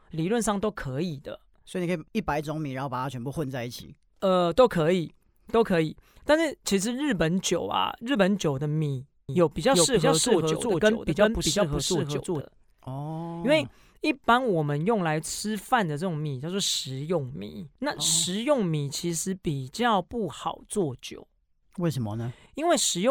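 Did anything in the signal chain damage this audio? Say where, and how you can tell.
Yes. The speech was likely captured twice, once through a second, slower path that mixed its copy back in at the driver or buffer stage. From 9.29 s to 12.41 s a doubled audio track is audible: a full-band duplicate trails the original by roughly 400 ms at about the same level. It carries no decay or room colour, so it sounds like a clean second voice rather than an echo, and it starts and stops abruptly.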